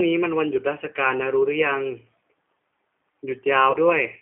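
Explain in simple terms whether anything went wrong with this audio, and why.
The whole clip passed through the G.729 codec, a low-data phone codec. It rebuilds speech from a simple model of the voice instead of sending the real sound. Nothing above about 3.5 kHz or below 200 Hz survives, so the speech sounds thin, rough and slightly synthetic throughout.

At 3.71 s there is VoIP packet loss concealed by the speech codec. About 30 ms of audio went missing, which fits a single lost packet. The decoder guessed the gap by stretching the sound just before it, leaving a brief, fading smear that lasts until about 3.77 s.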